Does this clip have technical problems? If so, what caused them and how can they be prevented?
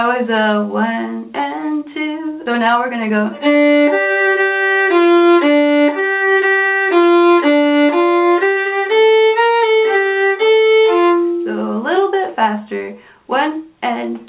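Yes. There are two faults.

The first is a skip ahead at 2.46 to 2.48 s. The sound jumps forward with no gap. About a second of audio is gone, and the two sides are joined almost directly. That stretch was lost in transit, or the jitter buffer overflowed and dropped it while later audio was already waiting. To prevent it, give the buffer enough headroom and keep the network path free of loss and bursts.

The second is a jitter buffer speed-up from 2.58 to 4.37 s. The sound runs at 110% speed with the pitch unchanged, so it sounds hurried. After the jump, the buffer held more audio than its target. To cut that delay, it removed many short pieces of one or a few pitch periods in a row, about a fifth of a second in total. To prevent it, smooth out packet delivery so delayed packets do not arrive in bunches.

The call path uses G.711 mu-law at 64 kbps, so nothing is heard above 4 kHz.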